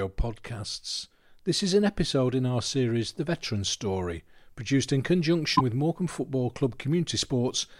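At 5.55 s the speech jumps ahead and a brief glitch runs to 5.61 s. It lasts about two 26.1 ms frames. This is likely a broken MP3 bit reservoir. Frames were lost, so the next ones read borrowed bytes from the wrong frame.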